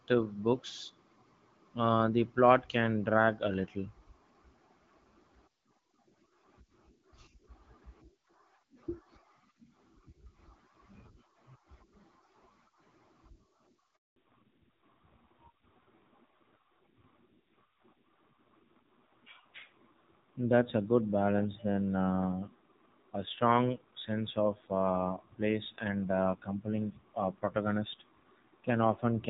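At 13.96 s the speech cuts out in a handover gap lasting about 200 ms, until 14.16 s. The voice fades within a few tens of milliseconds rather than clicking off, and the silence is clean. Unlike a dropout from packet loss, nothing is smeared or patched over, and what was said during the switch is simply lost.

From 14.16 s to the end comes a fallback to narrowband. The wideband HD Voice sound heard before the gap, only lightly coloured by its codec, gives way to audio with nothing above 4 kHz. It sounds duller and rougher, which fits a low-rate narrowband codec rather than a simple low-pass filter, because the coding grit arrives together with the lost treble.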